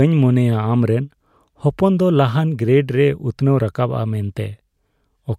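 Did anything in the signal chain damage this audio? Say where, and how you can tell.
No, nothing in this speech recording stood out on listening as damage from any stage of the signal chain.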